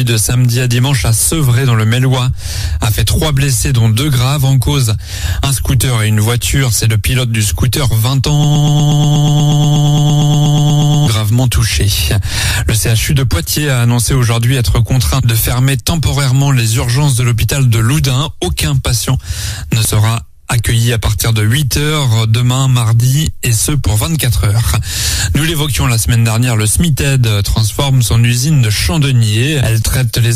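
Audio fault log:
8.44–11.08 s, broken-record loop: a fragment of about 120.5 ms repeats exactly, back to back, 22 times, so the sound sticks in place for roughly 2.6 s before moving on. The repetition is seamless and identical each pass, which likely comes from a player, encoder or stream stalling and resending the last fragment it held. The audio that belonged in that span never plays and is simply gone.
19.85 s and 29.83 s, audio missing between chunks: two brief skips, each losing roughly 30 ms, with the material on either side butted together and no gap of silence. They fall 10 s apart, which points to processing in 10-second chunks, with a small piece likely dropped each time one chunk closes and the next opens. Each skip registers as a sudden jump forward in the sound.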